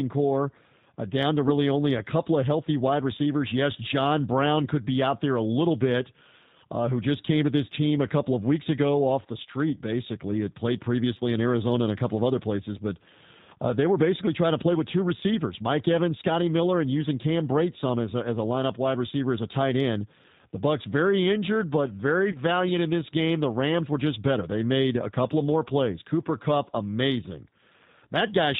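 The speech has passed through the G.729 codec at 8 kbit/s, which rebuilds each 10 ms frame from a vocal tract model and a few pulses and discards everything above 4 kHz. Throughout, the voice sounds muffled, slightly rough and synthetic, and the damage is plainly audible.

At 22.32 s, about 20 ms of audio went missing, which fits a single lost packet, and the decoder filled the gap by extending its last pitch and filter settings. The sound smears into a brief buzzy tone or coloured noise that fades, and the voice stays weak or distorted until about 22.38 s.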